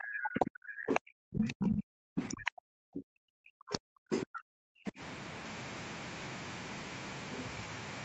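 Background gated by the echo canceller, 0.00 to 1.16 s: while the loudspeaker was playing, the canceller pulled the microphone down hard. The room tone sinks by about 40 dB, in total roughly 0.7 s of the stretch, then comes back when the canceller releases.

Other side's voice leaking through, 0.23 to 3.0 s: a second voice sits underneath the talker, roughly 15 dB lower. It is likely far-end sound from the loudspeaker that the echo canceller failed to subtract from the microphone signal.

Speech suppressed in double talk, 1.44 to 2.1 s: the talker's own speech dips by around 40 dB in pieces, roughly 0.3 s altogether, while the leaked voice is also present. The likely cause is that the canceller could not separate the talker from the loudspeaker echo and attenuated both.

Background gated by the echo canceller again, 2.43 to 4.85 s: the room sound drops out by about 40 dB for roughly 2 s in all. 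This gating is much longer than the first and creates audible holes in the ambience.

Other side's voice leaking through again, 3.7 to 4.92 s: the far-end voice returns, fainter this time at roughly 20 dB below the talker. It is likely residual echo the canceller left behind, overlapping the second gated stretch.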